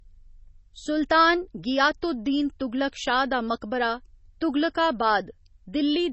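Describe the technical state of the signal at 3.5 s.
At 3.5 s the speech carries MP3 compression damage, present throughout the clip: nothing remains above 8 kHz, and weak spectral lines drop in and out between frames, giving a watery, swirling texture and smeared attacks. This likely comes from a low bitrate, roughly 24 kbps.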